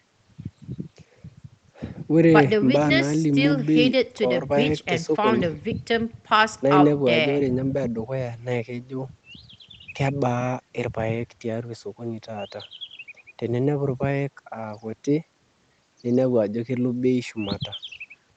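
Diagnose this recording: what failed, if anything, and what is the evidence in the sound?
Nothing failed in this speech recording; the band-limiting to about 8 kHz is simply what the call's microphone processing and Opus codec normally leave.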